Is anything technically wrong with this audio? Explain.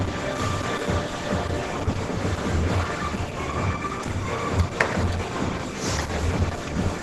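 Yes: heavy Opus compression runs through all of it, most likely from a low-rate hybrid-mode encode. Tones turn grainy and hoarse rather than swirly, and gaps fill with noise instead of MP3-style holes. The top is capped near super-wideband, which fits roughly 12 kbps.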